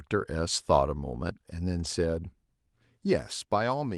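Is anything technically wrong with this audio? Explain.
Yes. There is a lost packet rebuilt from error correction, from 1.79 to 1.85 s in the speech. About 40 ms of audio went missing, which fits two lost packets. The packet after each one carried a low-bitrate backup copy, and the decoder played that copy in place of the lost audio. So there is no gap or dropout. Instead, that brief stretch sounds rougher and noisier than the speech around it.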